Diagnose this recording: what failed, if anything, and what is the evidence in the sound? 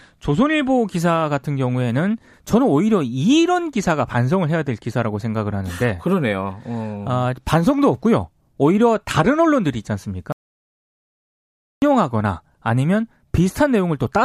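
An audio dropout to silence runs from 10.32 to 11.82 s: the speech breaks off mid-flow and about 1.5 s of it is lost, with no room tone underneath. The waveform flatlines to silence and the spectrogram shows a blank band. The likely cause is an input-side failure, such as a disconnected device or mute, while the recorder kept writing silence.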